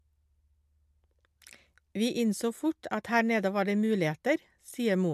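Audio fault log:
No faults found in the speech recording; nothing to log.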